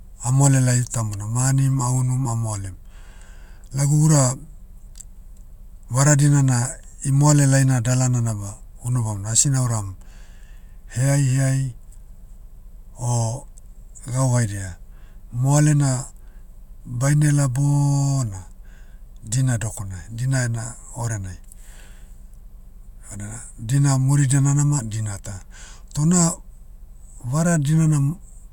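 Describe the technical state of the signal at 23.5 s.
At 23.5 s the speech signal is intact, with no dropout, distortion, glitch or other technical fault.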